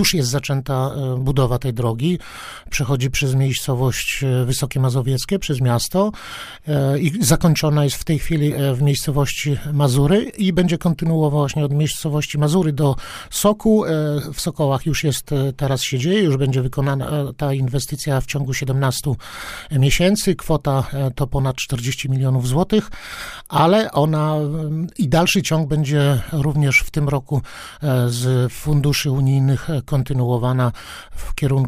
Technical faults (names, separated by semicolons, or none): none